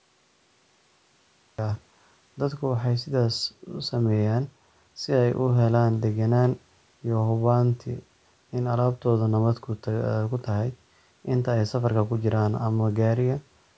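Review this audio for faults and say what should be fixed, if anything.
Cut-off start, from 0.0 to 1.59 s: the clip opens on digital silence, and the speech begins abruptly at 1.59 s, already mid-sound, with no natural onset or fade-in. Capture began after the talker had started, so the opening of that utterance was never recorded, and what survives is a hard edge where the stream came in. The call microphone processing, which leaves nothing above 8 kHz, sits on the audio that follows. To prevent this, start recording or open the stream before the talker begins, with a short pre-roll buffer.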